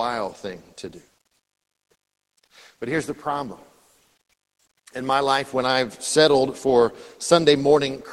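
Speech carried over a WebRTC call path shows no technical fault, with the top end stopping around 12 kHz in a way that fits an Opus call codec at a modest bitrate.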